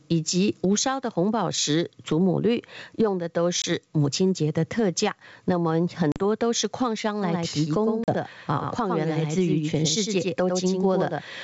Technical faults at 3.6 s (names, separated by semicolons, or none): gain pumping; packet loss on an ADPCM call